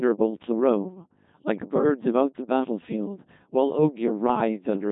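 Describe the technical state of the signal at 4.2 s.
At 4.2 s the speech is still passing through the Codec 2 vocoder, which covers the whole clip. The waveform itself is not carried. Only pitch, voicing, energy and a rough spectral envelope survive, and the decoder rebuilds the voice from sine waves. The result is robotic and buzzy, with heavy damage. Nothing remains above 3.8 kHz. The coarse quality fits a rate of around 2.4 kbit/s.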